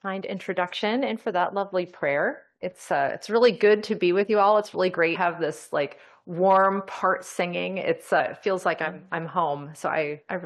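Compressed frames skipped at 5.14 s and 8.19 s: whole frames never reached playback, so the audio jumps ahead about 0.2 s, then about 0.1 s.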